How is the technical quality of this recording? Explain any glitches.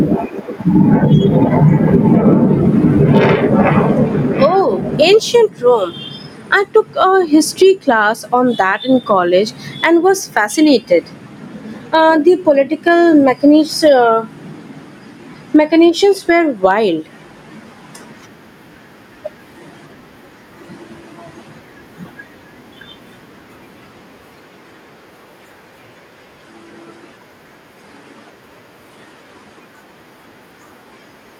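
The technical quality is compromised by gain pumping throughout the clip. The level swells in the pauses and ducks by around 10 dB under each loud speech sound, squashing the dynamics. The likely cause is excessive input gain driving a fast limiter. On a waveform, peaks look flattened, with the quiet parts between phrases rising. A spectrogram shows the level brightening in gaps and dimming under speech.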